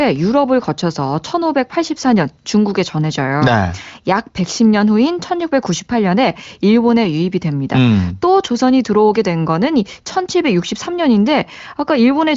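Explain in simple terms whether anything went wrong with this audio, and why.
Nothing went wrong with this speech recording; it was carried over an ordinary AMR wideband (HD Voice) phone connection, which is why there is no sound above about 7.6 kHz, and no fault can be heard anywhere in it.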